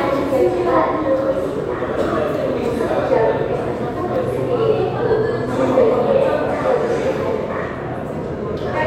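No technical faults are audible.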